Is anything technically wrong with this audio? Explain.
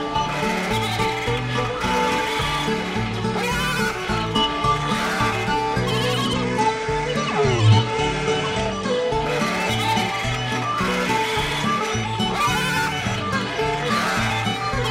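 Yes, there's a Bluetooth SBC bit pool drop from about 6.23 s to 9.07 s. The link seems to have got congested, so the sender cut its bit pool to keep audio flowing, and the sound points to a fall from around 28 to about 12, roughly 96 kbps. With that few bits, the top sub-bands get starved and everything else is quantised coarsely. So the treble goes dull and a gritty noise creeps in until the rate comes back at about 9.07 s.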